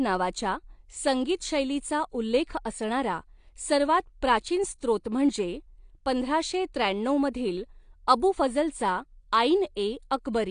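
Throughout the speech, the audio was likely passed through AAC compression at a low bitrate, consistent with roughly 32 kbps AAC-LC. Nothing survives above 9.8 kHz, and coarse quantisation leaves the speech dull and smeared, with a plainly audible warbling, fizzy texture.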